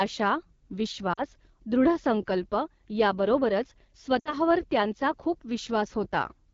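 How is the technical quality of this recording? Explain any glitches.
The quality is poor: the speech runs through a low-rate wideband phone codec the whole way, and two short dropouts break it.

AMR wideband (HD Voice) codec: The encoder runs near the bottom of its rate range, consistent with about 8.85 kbit/s, so its pulse-driven vocal tract model is starved of bits. The damage is plainly audible: the speech sounds rough and raspy throughout, with a thin, noisy top end.

Lost AMR speech frames: From 1.13 to 1.21 s, and again from 4.20 to 4.34 s just before "त्यांचा खूप", speech frames were corrupted, which fits two and then three lost frames. The decoder stretched the last good pitch and spectral settings with falling gain, so each gap drops to near silence within two frames and returns rough.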